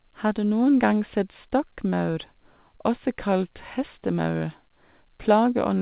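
Speech over a call link band-limited to 4 kHz, with short concealed packet loss at 1.90 to 1.94 s: 20 ms was synthesized from the preceding sound, giving a brief smear rather than the hard silent gap of a dropout.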